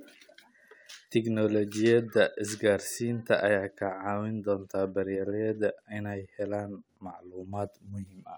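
No technical faults can be heard anywhere in the recording.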